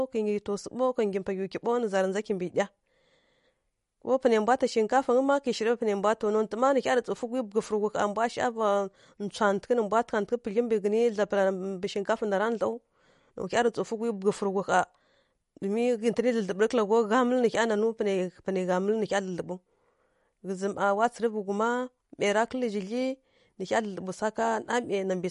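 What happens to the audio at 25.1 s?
At 25.1 s you're hearing the same damage that runs through the whole clip, most likely MP3 compression at a low bitrate, which fits something around 48 kbps. Nothing survives above 11.2 kHz, so the top end sounds dull, and the encoder is clearly starving. It drops weak frequency lines that pop in and out from frame to frame, giving the speech a watery, swirly quality with metallic chirps on the s sounds and smeared consonant attacks.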